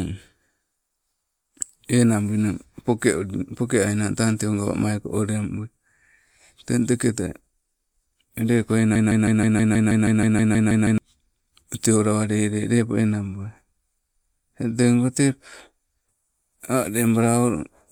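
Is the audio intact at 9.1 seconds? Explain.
No. At 9.1 seconds the speech is caught in a broken-record loop running from 8.96 to 10.98 s: a 160 ms fragment repeats back to back 13 times, and the speech that belonged there is lost. The likely cause is a stalled player or stream resending its last buffered piece.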